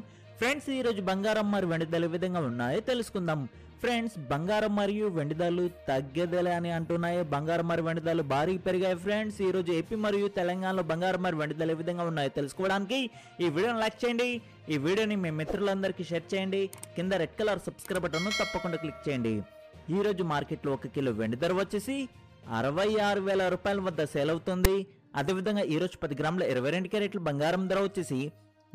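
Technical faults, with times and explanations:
24.65 s, file tags played as audio: a brief harsh rasp with hard edges, where a block of text metadata was decoded as samples. The byte values give a loud buzz biased to one side, seen as a thin vertical broadband stripe and an off-centre waveform block.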